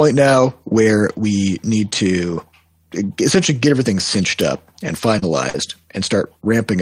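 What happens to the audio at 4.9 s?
Around 4.9 s the speech has two lost packets rebuilt from error correction, at 4.87 to 4.89 s and 4.97 to 4.99 s. Each lost 20 ms packet was replayed from a low-bitrate copy carried in the next packet, so there is no gap. Those two brief stretches sound rougher and noisier. On a spectrogram they appear as short smeared blocks, with an unbroken waveform.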